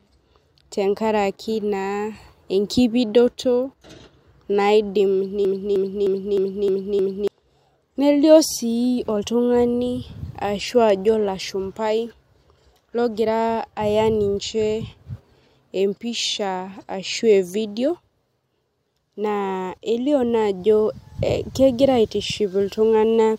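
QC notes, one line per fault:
5.45–7.28 s, broken-record loop: a 0.31 s fragment of speech repeats exactly, back to back, six times. This likely comes from a stalled player or stream resending its last buffered piece, and the speech due in that span is lost.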